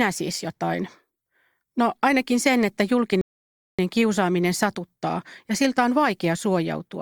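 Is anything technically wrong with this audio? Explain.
Yes, there is a rebuffering stall. At 3.21 s, just after "ainakin sen että", the speech drops to silence until 3.79 s. The player ran out of downloaded audio and waited for more. Playback then resumes exactly at "kiusaaminen satuttaa ja siltä". Nothing is lost, but 573 ms of dead air is added.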